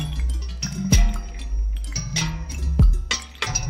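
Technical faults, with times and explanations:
No technical faults detected.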